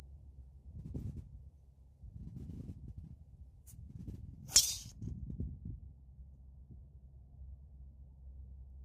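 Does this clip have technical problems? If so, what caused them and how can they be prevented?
Yes. From 0.0 to 4.92 s, pre-emphasis is left on: the J.17 treble lift was never undone by de-emphasis, so 10 kHz sits about 11 dB above 1 kHz, making the sound thin, bright and sibilant. It ends at 4.92 s. Prevent it by applying the matching J.17 de-emphasis at playback.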